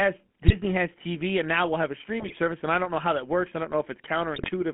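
Throughout, the speech carries GSM full-rate codec roughness: a buzzy, gravelly texture within a 150 Hz to 3.4 kHz band, consistent with a 13 kbps GSM full-rate coder rather than the smoother muffling of plain band-limiting. GSM bit errors break in at 0.42 to 0.55 s, 2.2 to 2.37 s and 4.34 to 4.51 s as squawks, pops and gargling, where corrupted decoder parameters distort frame after frame instead of leaving silent dropout gaps.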